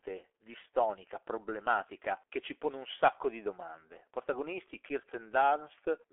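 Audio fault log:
Throughout: G.723.1 codec damage, heavy. Speech sits in a 300 Hz to 3.4 kHz telephone band with nothing above 3.6 kHz, squeezed to 6.3 kbit/s in long frames whose slow-moving voice model smears consonants, leaving the sound muffled, hoarse and blurred.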